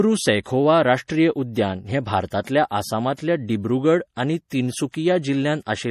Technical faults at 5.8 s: MP3 compression

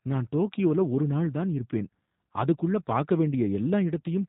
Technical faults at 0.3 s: G.729 codec

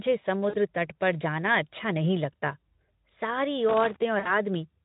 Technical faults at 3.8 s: loose connector crackle

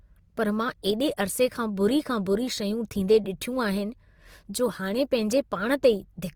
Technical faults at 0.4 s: Opus compression

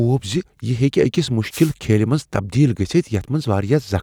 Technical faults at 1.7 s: wireless microphone noise hit

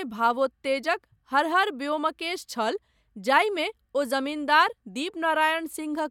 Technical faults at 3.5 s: none

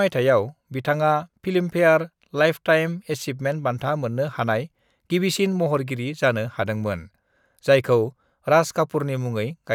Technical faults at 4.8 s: none

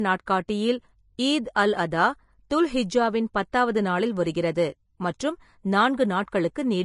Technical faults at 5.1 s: Vorbis compression

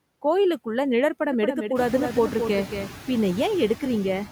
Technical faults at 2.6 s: noise suppressor artifacts; doubled audio track

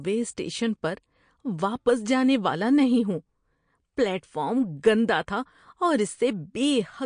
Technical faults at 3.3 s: MP3 compression

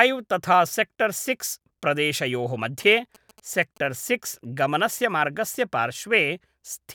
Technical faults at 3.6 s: GSM signalling bursts

